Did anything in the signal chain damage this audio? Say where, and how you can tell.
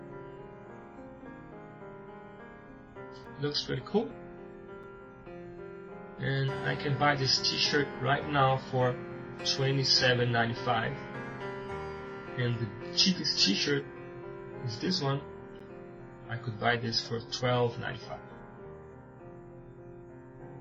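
Yes, blocks of digital silence at 3.24, 4.83 and 15.6 s, lasting about 4, 5 and 11 ms. Each is heard as a tick. The last two lengths fit 256- and 512-sample buffer dropouts.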